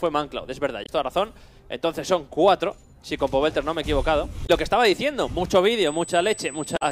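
At 0.82 to 0.89 s and again at 4.43 to 4.50 s, damaged data in the compressed stream makes the decoder misread frames and lose sync while it hunts for the next header. Each time the sound breaks into a brief glitch of about 70 ms.

From 5.86 s to the end, current drawn by the USB bus in 125-microsecond microframes leaks into the power or ground. This produces USB whine, a steady 8 kHz tone sitting roughly 20 dB below the sound.

At 6.73 to 6.82 s, under that whine, a third stretch of corrupted stream data throws the decoder out of sync. The result is another glitch, lasting about 96 ms.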